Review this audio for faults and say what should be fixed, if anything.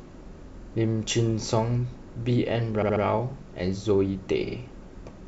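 Repeated frames: runs of compressed frames were written or sent more than once, so the decoder replays the same slice of speech, heard as a stutter. At 0.61–0.70 s and 4.46–4.55 s a 46 ms block plays twice more, adding 93 ms each. At 2.81–3.02 s a 70 ms block plays three more times, adding 209 ms. Checking frame sequence numbers or timestamps and dropping duplicates before decoding would prevent it.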